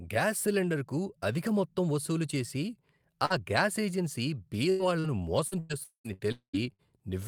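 At 3.25 to 3.33 s, just before "గ్యాస్ ఏజెన్సీ", a burst of packet loss cuts into the speech. The receiver extends the preceding sound for about 45 ms, fading it down, then resumes with roughly 40 ms of audio missing.

Inside that burst, from 3.30 to 3.32 s, one lost packet is rebuilt from error correction. The decoder plays a 20 ms low-bitrate copy carried in the following packet, so there is no hole, but that frame sounds rougher and noisier.

From 4.70 to 6.87 s, after "గ్యాస్ ఏజెన్సీ", repeated packet loss gives the speech a choppy, robotic quality. Six gaps, the longest 99 ms, are each patched by continuing the last sound. About 18% of the stretch is concealed, some of it rebuilt from error correction, and about 400 ms never plays.

Within that stretch, at 5.83 to 6.07 s and again at 6.32 to 6.56 s, the last sound is drawn out and decays for over 200 ms, then falls silent for about 110 ms and 100 ms respectively. 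Each time the speech resumes further on with about 220 ms missing. The likely cause is a long network dropout.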